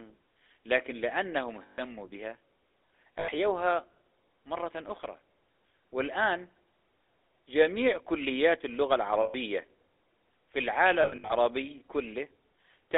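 The speech passes through the GSM full-rate codec, which models the vocal tract with coarse pulse excitation within 300 Hz to 3.6 kHz, leaving a plainly buzzy, gravelly roughness throughout. Lost GSM frames at 1.62 s (160 ms), 3.18 s (100 ms) and 9.22 s (120 ms), and scattered between 11.02 and 11.34 s, are patched with repeats of the last good frame, briefly producing a rough metallic ring.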